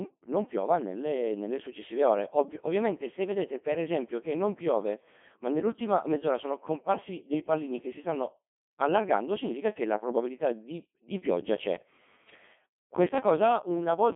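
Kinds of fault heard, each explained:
Codec 2 vocoder: Throughout the speech, a very low-rate vocoder has replaced the original waveform with a model built from pitch, voicing, energy and a coarse spectral envelope, which the decoder rebuilds from sine waves. The damage is heavy: the voice sounds robotic and buzzy, which fits a rate around 2.4 kbit/s, and the band is confined to a radio-style 150 Hz to 3.5 kHz, with nothing left of the true waveform detail.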